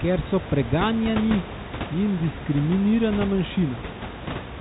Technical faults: none

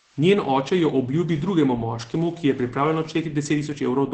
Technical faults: Opus voice compression

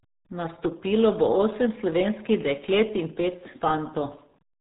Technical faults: RealAudio 14.4 codec

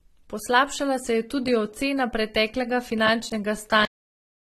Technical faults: transcoding between lossy codecs; cut-off end

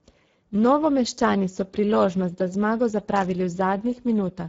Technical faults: Speex codec; loose connector crackle

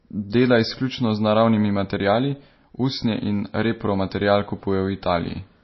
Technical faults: MP3 compression

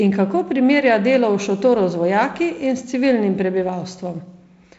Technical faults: none

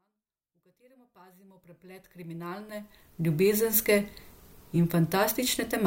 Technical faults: none

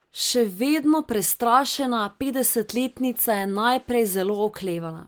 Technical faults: none

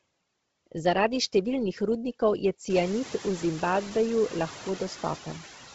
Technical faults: noise suppressor artifacts; Bluetooth LC3 compression

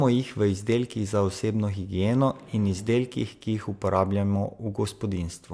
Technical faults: none

